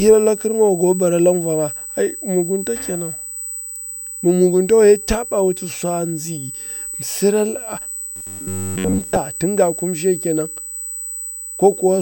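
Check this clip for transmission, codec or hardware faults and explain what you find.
Two faults are audible: a constant high-pitched whine and a short burst of robotic distortion.

USB whine runs through the whole clip as a steady 8 kHz tone, about 15 dB below the speech. The 125-microsecond USB microframe rhythm leaks through power or ground. A spectrogram shows an unbroken horizontal line at 8 kHz.

Robotic sound from repeated short buffers appears from 8.16 to 9.18 s. The speech turns into a rigid metallic buzz at 93.8 Hz. It is likely caused by late audio being replaced with repeats of roughly 10.7 ms chunks. The waveform shows identical repeating segments, and the spectrogram shows a comb of evenly spaced harmonics.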